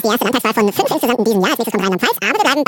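The sound throughout runs at double speed and an octave high, a shift of 12 semitones, so everything is compressed in time and raised in pitch. This is audio read two samples at a time: the reader treats each pair of samples as a single frame, as if the stream held two channels or samples twice as wide. It therefore consumes the data twice as fast.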